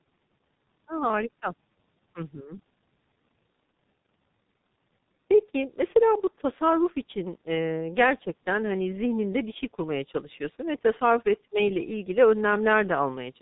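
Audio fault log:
Throughout: G.723.1 codec damage, heavy. The speech is squeezed into roughly 6 kbit/s with 30 ms frames, so nothing survives above 4 kHz and the slowly updated voice model leaves a muffled, hoarse sound with smeared consonants. A spectrogram shows a hard ceiling at 4 kHz and blocky, frame-stepped harmonics.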